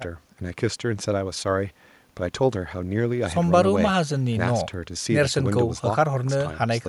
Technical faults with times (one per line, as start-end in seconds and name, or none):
none